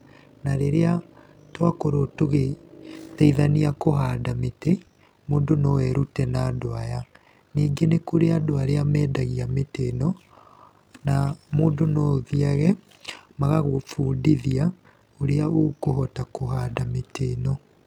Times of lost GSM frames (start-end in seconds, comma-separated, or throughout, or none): none